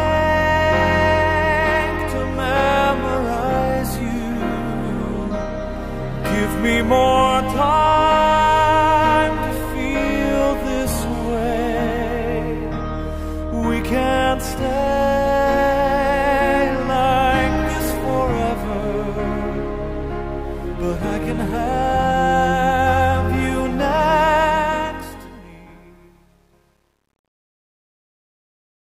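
Truncation distortion on the fade-out from 24.38 s to the end, worst after 25.63 s: the fade keeps too few bits (consistent with 10-bit) and no dither, so the tail turns gritty.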